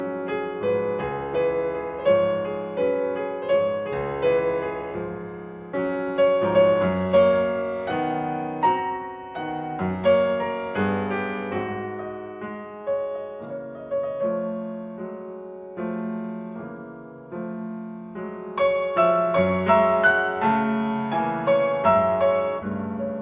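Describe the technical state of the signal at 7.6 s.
At 7.6 s the signal is intact, with no audible dropout, distortion, glitch or other technical fault at that point.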